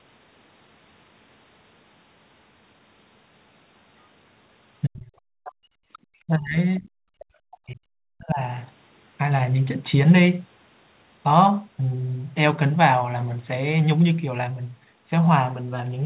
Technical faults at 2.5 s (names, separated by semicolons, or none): none